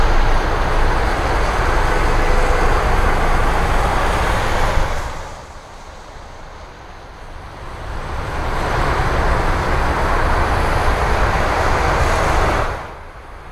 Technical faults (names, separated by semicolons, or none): none